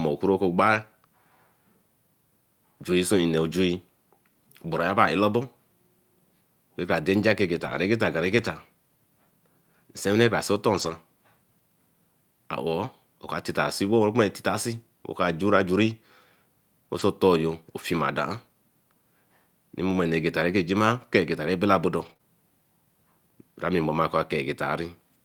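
At 0.73–0.79 s, 7.55–7.77 s (just after "cara dein nja ke"), 8.37–8.47 s, 10.73–10.91 s, 16.99–17.01 s and 21.97–22.11 s, a lost packet was rebuilt from error correction. Each following packet carried a low-bitrate duplicate of the missing audio, so nothing drops out, but those stretches play back coarser and grainier. The longest, at 7.55 s, is about 120 ms of degraded sound. The shortest, at 16.99 s, is a single 20 ms frame.

Right after the last of these, at 22.13–22.17 s and 22.17–22.21 s, comes short concealed packet loss. Two consecutive chunks arrived with no backup copy, and the decoder invented the fill by extending the preceding sound before crossfading into real audio. Together they span about 75 ms and come across as a brief smeared wobble directly following the rough patch.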